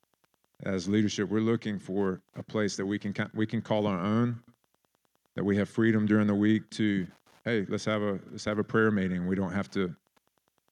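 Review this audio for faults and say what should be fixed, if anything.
Wi-Fi interference runs through the whole speech clip: a steady tick every 102.4 ms, roughly 40 dB below the speech, where a nearby radio's beacon is rectified by the audio circuit. A spectrogram shows evenly spaced thin vertical broadband lines; the waveform shows small regular spikes. Keep Wi-Fi devices away from the audio gear and use shielded, properly grounded cabling.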